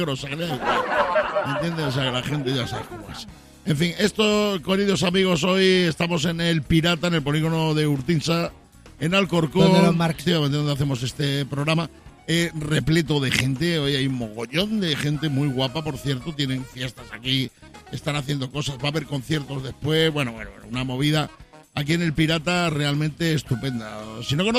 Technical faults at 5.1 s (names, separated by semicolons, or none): none